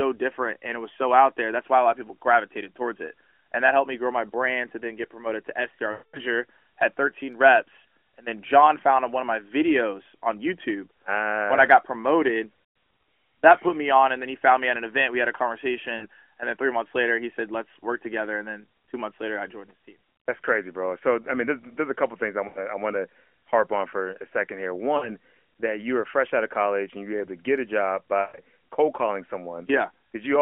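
Lost AMR speech frames occur at 5.92–6.22 s, 12.64–12.76 s after "I ah got promoted", 15.98–16.06 s, 22.48–22.60 s, 24.98–25.09 s between "for a second here" and "that you were fresh", and 28.22–28.40 s between "to get a job" and "cold calling". The decoder repeats the last good frame's pitch and spectral shape at falling gain, so the sound stretches, warbles and fades. The longest gap, about 220 ms, reaches near-silence before recovering weakly. On a spectrogram this shows as frozen harmonics smeared across time within the narrowband 250–3400 Hz line. The waveform shows a decaying envelope.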